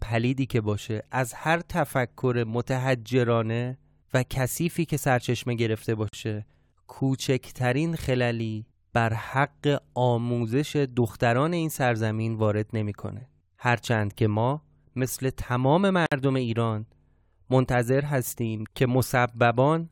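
Speech, with a gap at a join of encoded pieces at 6.09 s (about 47 ms) and again at 16.06 s (about 57 ms). Each is a short hole of silence with softened edges, after which the speech resumes exactly where it broke off. That continuity separates it from a dropout, which loses material. Separately encoded segments were joined without trimming encoder delay and end-frame padding.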